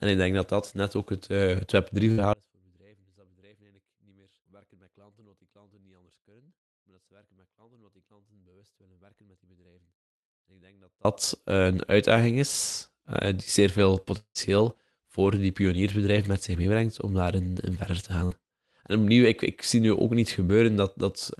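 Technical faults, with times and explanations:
2.11–2.21 s and 18.25–18.34 s, burst of packet loss: a short run of packets went missing each time, so the receiver stretched the last bit of sound for about 60 ms, fading it into a brief buzz or hiss, then jumped ahead past roughly 60 ms of lost audio.
2.33–11.05 s, audio dropout to a faint residue: the speech cuts out abruptly and stays gone for about 8.7 s. All that's left is a faint sound sitting roughly 35 dB under normal level, which points to the feed likely breaking upstream while the rest of the chain stayed live.
14.18–14.38 s, long network dropout: audio likely stopped arriving for a stretch. The receiver filled about 174 ms by extending the last sound as a decaying buzz or hiss that ended in about 80 ms of silence, and resumed with around 180 ms of speech simply gone.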